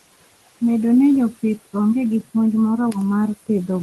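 Speech recorded over steady room noise sitting about 19 dB below the voice, with noise suppressor artifacts present for the whole clip. The suppressor estimates the steady noise in each frequency band and pulls those bands down frame by frame, by about 18 dB here. The background therefore drops away in the gaps between words and comes back up underneath them as speech opens the bands, giving a pumping noise floor. The top end stops near 12 kHz, which fits the bandwidth of the call codec.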